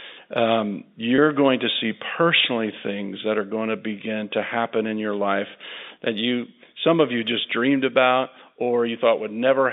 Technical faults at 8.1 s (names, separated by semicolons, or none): none